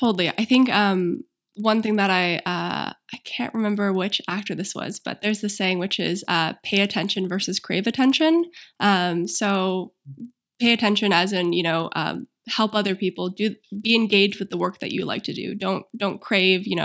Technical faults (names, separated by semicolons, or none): resampler restarted on every block